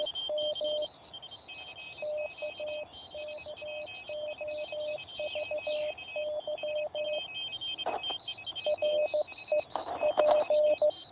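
Nothing stood out on listening to this audio.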